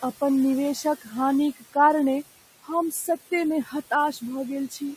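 A noise suppressor runs through the whole clip, pulling down what it judges to be steady noise by about 15 dB frame by frame, so the room noise, about 17 dB below the speech, dips between words and swells back under them. At 1.01 to 1.13 s and again at 3.64 to 3.73 s, the suppressor mistakes parts of the speech for noise, cutting them by about 13 dB and about 11 dB. For roughly a tenth of a second each time, those sounds come across swallowed and faint.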